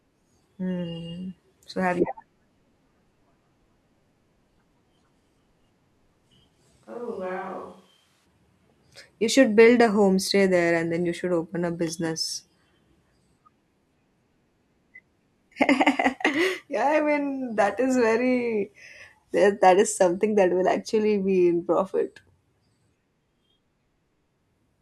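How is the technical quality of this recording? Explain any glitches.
One glitch stands out in this speech recording. A switch to a distant microphone occurs from 6.87 to 8.24 s, likely because the close microphone's feed dropped out. The sound turns abruptly hollow and roomy, thinner in the bass and roughly 10 dB quieter, with room noise rising to around 30 dB below the speech, then snaps back.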